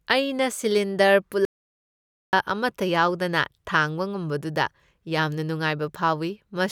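Speech, with an audio dropout to silence from 1.45 to 2.33 s. For about 0.88 s the sound cuts to silence, with no room tone at all. The input was likely lost while recording continued writing silence. The speech in that gap is gone.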